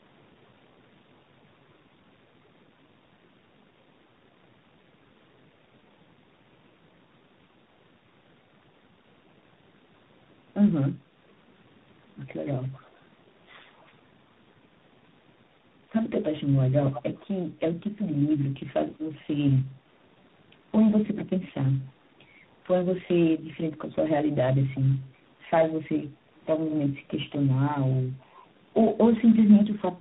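It's a speech clip that sounds rough, muffled and warbly all the way through, with nothing above 3.8 kHz, which points to tandem speech coding across several codecs in a row. There are also delayed copies of the voice, about 163 ms behind, at 12.36 to 12.96, 16.91 to 17.25, 17.41 to 17.53 and 21.42 to 21.48 s, likely echo leak from a loudspeaker-side canceller.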